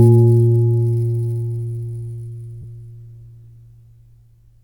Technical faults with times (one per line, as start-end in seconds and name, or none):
2.62-2.64 lost LE Audio frames